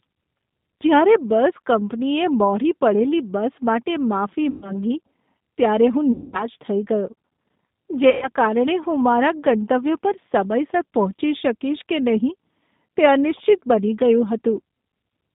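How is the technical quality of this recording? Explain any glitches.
The technical quality is limited: the whole recording carries plainly audible G.729 codec damage, and three short dropouts break up the speech.

Throughout the clip, the speech sounds narrow, slightly rough and synthetic, with nothing below roughly 150 Hz or above about 3.7 kHz. This is the G.729 codec (the G.729A variant at 8 kbit/s). Rather than sending the waveform, it rebuilds each 10 ms frame from a vocal tract filter, a pitch predictor and a few pulses. At that low bitrate the fine detail of the speech is lost, which produces the rough, slightly artificial quality.

At 4.50–4.77 s, just after "બસ માટે માફી", at 6.12–6.44 s, just before "થઈ ગયો", and at 8.10–8.30 s, just before "કારણે હું મારા ગંતવ્ય", the speech turns into a stretched, buzzy or noisy smear that fades and then recovers weakly. Each is VoIP packet loss concealed by the speech codec. 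The decoder filled about 120 ms, 210 ms and 120 ms of missing audio by repeating its last pitch and filter at falling gain, which fits 30 ms packets. Because every frame builds on the previous one, the distortion lingers after real packets arrive again.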